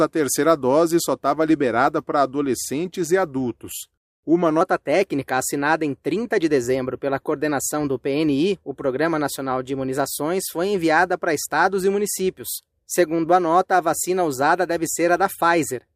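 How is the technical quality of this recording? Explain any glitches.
There's one real problem: from 4.61 s to the end, there's a section at the wrong speed. It runs 1.12 times too fast, likely because that part was played against the wrong clock, so pitch and tempo rise together, roughly two semitones sharp and hurried.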